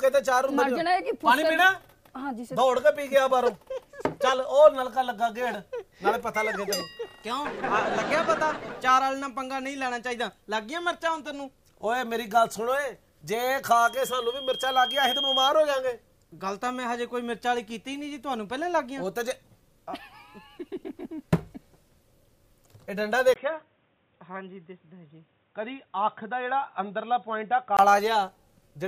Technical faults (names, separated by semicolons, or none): loudspeaker feedback squeal; input switched to a poorer device